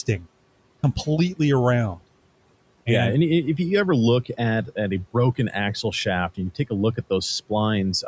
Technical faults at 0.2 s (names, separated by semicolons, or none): speech cut by the noise suppressor